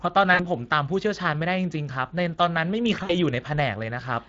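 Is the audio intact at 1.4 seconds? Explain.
No. At 1.4 seconds, as across the whole clip, the speech sounds plainly hoarse and grainy. This is Speex codec damage. The CELP coder spends too few bits modelling the excitation, at a rate of around 20 kbps.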